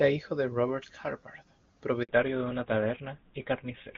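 At 2.03 s the call is handed from one network to another, and for 60 ms no speech frames arrive while the link switches over. The speech falls away almost at once and a short hole of silence opens, ending at 2.09 s when the new connection begins carrying audio. Whatever was said inside that gap is simply gone.

From 2.09 s to the end, the call has fallen back to narrowband. The clear HD Voice coding heard before the switch, whose clean top end fits AMR-WB at 23.85 kbit/s, gives way to an older narrowband codec, and the sound points to GSM full rate at 13 kbit/s. Nothing above 4 kHz survives, so the speech loses its sibilance and air and turns dull, boxy and rougher for the rest of the clip.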